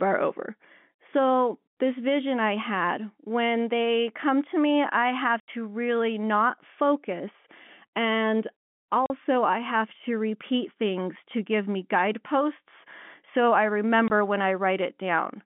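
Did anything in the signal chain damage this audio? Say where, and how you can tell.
Yes, at the network stage: packet loss filled with silence. Hard-edged dropouts at 5.4–5.48 s (80 ms, between "to me I have" and "really not focus"), 9.06–9.1 s (40 ms, before "I have") and 14.08–14.1 s (20 ms, after "me guideposts so I"). Every gap is a multiple of 20 ms, which points to 20 ms packets muted by the receiver over the band-limited G.711 line.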